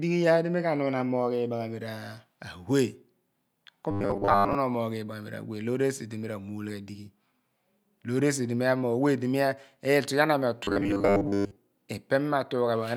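From 3.91 to 4.55 s and again from 10.64 to 11.56 s, the speech turns into a rigid 100 Hz metallic buzz. This robotic sound likely comes from a roughly 10 ms buffer being repeated in place of most of the real audio.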